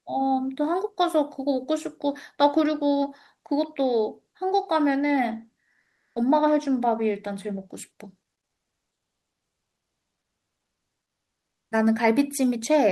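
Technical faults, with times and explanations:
5.81–6.15 s, comfort noise in place of the background: for about 340 ms in a speech pause, the real room sound gives way to a steady, featureless hiss. It sits about 8 dB lower than the background around it, which is itself about 50 dB below the loudest speech. The likely cause is Opus discontinuous transmission. The sender stopped sending during silence, and the receiver filled the gap with synthetic noise. The speech on either side is band-limited at about 12 kHz by the call codec.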